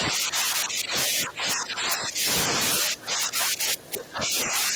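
Throughout the speech, integer overflow produces violent cracks on the loudest moments. The signal is driven about 3 dB past the integer limit, so a small fraction of peaks wrap to the opposite sign instead of clipping. On the waveform these appear as sudden jumps to the opposite sign, and on the spectrogram as thin broadband vertical streaks.

From 0.0 to 2.27 s, and again from 2.79 s to the end, the speech dips and thins in pieces. It loses high end and sinks by up to about 15 dB, then about 20 dB. This is likely an echo canceller suppressing the talker during double talk. The spectrogram shows patchy, darkened upper bands.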